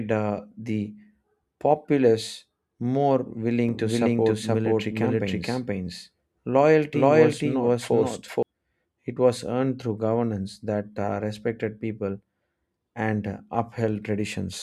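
Right after "populace more", at 3.69 s, a doubled audio track kicks in and runs until 8.43 s: the speech repeats itself about half a second late, at roughly the same level, with no room tail, and it switches on and off abruptly. The likely cause is a second, slower capture path getting mixed in.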